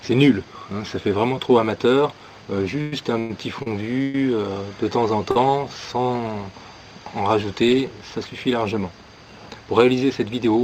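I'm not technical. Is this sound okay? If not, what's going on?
No, there are three delivery problems, all caused by the audio arriving unevenly over a network rather than by the recording itself.

From 2.81 to 4.15 s there are repeated stalls (stutter). The incoming audio kept running dry, four times in that stretch, and each time the player held on to the last bit of sound until more arrived. Together those holds add up to about 0.37 s, roughly a quarter of that passage, with the longest lasting 117 ms. Nothing is lost, but the sound drags and catches.

At 5.31 to 5.37 s there is a short stall from a late packet. One piece of audio showed up 46 ms late, so the player stretched the preceding sound to cover the wait, then carried on exactly where it left off. You hear a brief held moment, possibly with a faint buzz or dip.

From 10.30 s to the end there is a jitter buffer speed-up. Audio had piled up in the player's waiting area, so it trimmed tiny slices, around 40 ms in total, to catch up. 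The sound plays at 110% speed with its pitch unchanged, so the last part feels hurried.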